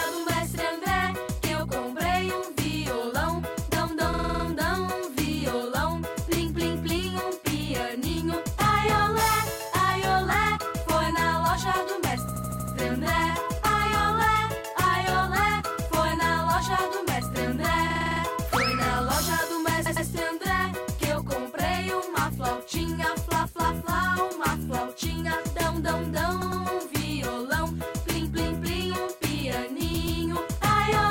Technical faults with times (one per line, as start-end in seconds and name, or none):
4.13-4.44 repeated frames
12.28-12.75 repeated frames
17.90-18.21 repeated frames
19.86-20.06 repeated frames
26.41-26.62 repeated frames
29.94-30.20 repeated frames